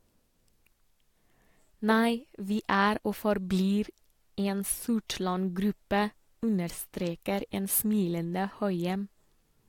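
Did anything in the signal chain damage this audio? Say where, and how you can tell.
No, nothing along the chain audibly damaged this speech recording, and no stage from capture through playback leaves a mark that can be heard.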